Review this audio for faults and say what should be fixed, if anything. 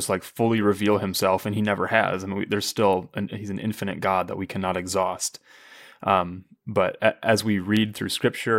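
Clock drift buffer slips run from 1.16 s to 7.77 s, starting just after "like fully reveal": a regular click in the speech every 1.32 s, about seven in all. The likely cause is two unsynchronised clocks differing by roughly 150 ppm, so the buffer drops or repeats a handful of samples each time. To prevent it, lock both devices to one word clock or use asynchronous sample-rate conversion.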